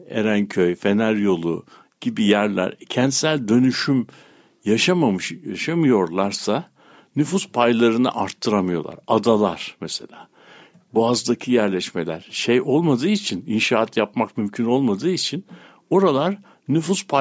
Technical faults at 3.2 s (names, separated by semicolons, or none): none